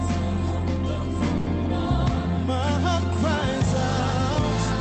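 At about 1.37 to 1.48 s there's a short stall from a late packet: the buffer ran dry, so roughly 90 ms gets stretched, holding the sound with a faint buzz or dip.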